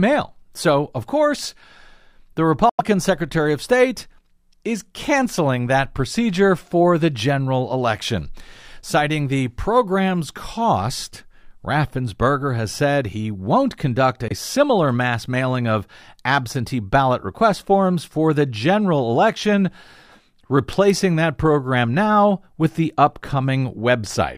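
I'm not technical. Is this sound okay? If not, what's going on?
No. The audio was most likely traveling over a Bluetooth link to headphones, and twice some of it arrived too late to be played, so it was thrown away. This is called a Bluetooth dropout. You hear a sudden brief silence: about 90 ms from 2.69 to 2.81 s, and about 23 ms at 14.28 s, between "said he won't conduct" and "similar mass mailing of". The speech then picks up a little further along, skipping the missing bit.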